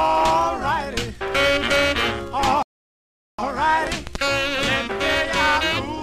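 At 2.63 s the audio stops dead and stays silent until 3.39 s, a rebuffering stall. The player ran short of downloaded data, paused for about 0.76 s while more arrived, then picked up at exactly the sample where it left off, so nothing is skipped but time is inserted. On a waveform this shows as a flat gap with clean edges; a spectrogram shows a blank vertical band with matching content on either side.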